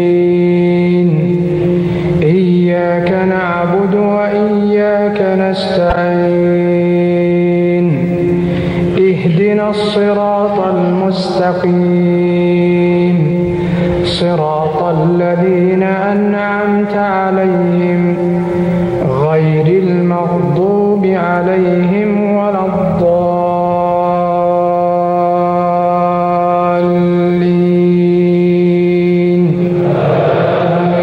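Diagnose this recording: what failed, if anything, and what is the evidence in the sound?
A short garbled flutter, 5.90 to 5.97 s: frames out of order in the network stream, two adjacent 26 ms blocks swapped, fitting single codec frames.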